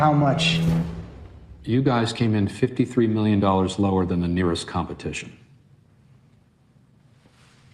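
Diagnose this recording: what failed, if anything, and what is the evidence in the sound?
Nothing failed at any stage; no faults are audible.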